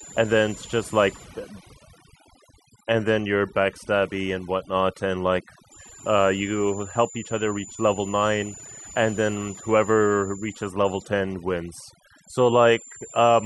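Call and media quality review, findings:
Switching supply whistle, whole clip: high tone near 7 kHz, wandering between 6.97 and 7.29 kHz, roughly 20 dB under the speech. Probable component: switching power supply in audible burst mode, frequency shifting with load.

Overdone noise removal, whole clip: background dropped and broken up into twinkling specks; quiet syllable tails eaten. Probable component: noise reduction set too aggressive, muting individual bands judged close to the noise estimate.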